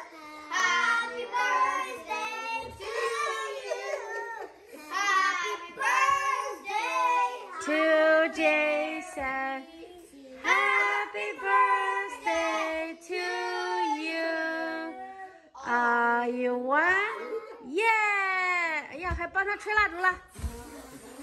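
Three sharp, isolated clicks occur, at 0.6, 2.84 and 9.13 s. Each is a brief tick with nothing missing around it. The likely cause is dropped samples: under a millisecond of audio vanishes, so the waveform jumps abruptly to a later value.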